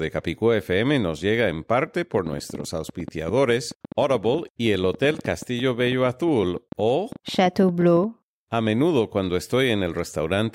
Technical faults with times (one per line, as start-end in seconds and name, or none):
2.15-8.05 train of clicks